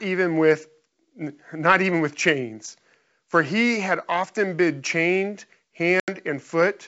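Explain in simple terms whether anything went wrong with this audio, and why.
Right after "had often been chained", at about 6.0 to 6.1 s, the speech drops into a sudden silent gap of about 80 ms, then comes back with a brief roughness. This is packet loss on an ADPCM call: a few lost packets were filled with silence, and the receiving decoder lost track of the level it was predicting. It took a moment to catch up.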